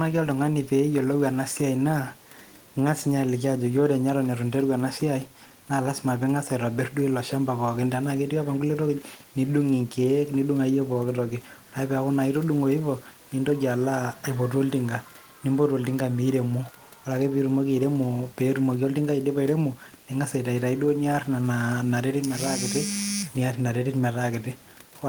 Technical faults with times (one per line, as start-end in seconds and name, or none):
none